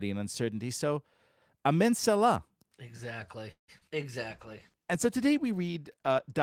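At 3.51 s the speech halts in a call audio freeze lasting until 3.70 s. The last sound carries on as a decaying fill and then drops to about 100 ms of silence, so roughly 0.17 s of extra time is inserted. The speech resumes exactly where it stopped with nothing lost. This points to packets held up in transit and the jitter buffer running dry as the likely cause, with the receiver stretching the final sound until delivery resumed.

Immediately after, two instances of short concealed packet loss follow, at 3.78 to 3.83 s and 3.89 to 3.93 s. Each time about 20 ms of audio failed to reach the decoder in time, and the receiver patched the hole by extending the preceding sound before crossfading back into the real signal. These come across as brief smears or small wobbles, and a quick consonant falling in either gap can disappear.

From 4.32 s to the end of the clip there is a call bitrate drop, with the encoder going from 32 kbps to 16 kbps for the final 2.1 s or so. 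The reduced bit budget forces coarser coding and a narrower upper band, so the speech turns rough, watery or muffled, and it does not recover before the clip ends.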